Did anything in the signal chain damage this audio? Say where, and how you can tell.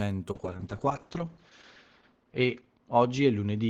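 Yes. A call bitrate drop at the codec stage runs from 0.32 s to the end of the speech. The encoder falls from 32 to 7 kbps and holds the floor for 1.51 s. The coarser coding sounds rough and watery, and bandwidth shrinks from 20 kHz to 8 kHz, muffling it.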